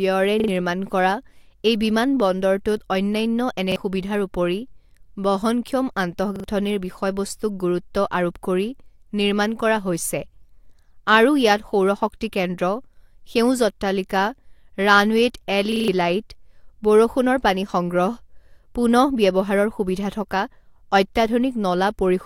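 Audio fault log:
0.40–0.48 s, repeated buffer: one short slice plays three times, a quick stutter with a hard join at each repeat, which fits a 40 ms buffer replayed while fresh audio was late; about 70 ms is lost.
3.72–3.76 s, repeated buffer: after "অন্যান্য এনে", one slice doubles, skipping about 40 ms.
6.36–6.44 s, repeated buffer: a triple stutter just before "বিষয়বস্তুক গুৰু্ত্ব আৰোপ কৰি", about 70 ms lost.
15.72–15.88 s, repeated buffer: five plays, a longer stutter, around 150 ms lost.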